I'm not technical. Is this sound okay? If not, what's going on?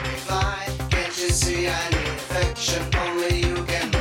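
Yes, nothing stood out as a problem when listening to this sound.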